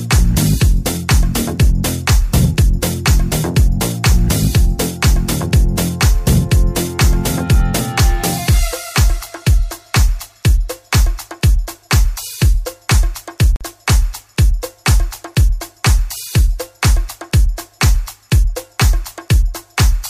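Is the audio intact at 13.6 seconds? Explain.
No. A block of digital silence runs from 13.56 to 13.61 s, about 46 ms. Samples dropped to zero, likely from an unfilled buffer, which fits a 2048-sample block. It is heard as a short hole.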